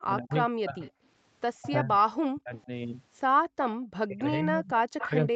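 From the start to 0.82 s, again from 1.58 to 2.7 s, and from 4.06 s to the end, the speech is suppressed in double talk, dipping by up to roughly 35 to 40 dB or breaking into fragments. The likely cause is an echo canceller that ducked the near talker while the far side spoke. On a spectrogram the voiced bands thin out or vanish in patches, and the waveform envelope caves in.

An echo leak appears at 0.29 to 0.36 s, at 0.82 to 0.91 s, and at 4.99 to 5.05 s. Each is a copy of the voice arriving 132 ms late, about 15 dB below the speech in the first and last instance and about 25 dB below in the second. It likely comes from loudspeaker pickup that the canceller did not fully remove, and shows as a weaker, time-shifted repeat of the harmonic pattern.

From 3.42 to 3.78 s the background is gated by the echo canceller. The room sound drops by about 31 dB for a brief moment, then returns. It shows as a hole in the noise floor on the spectrogram and a near-flat stretch in the waveform.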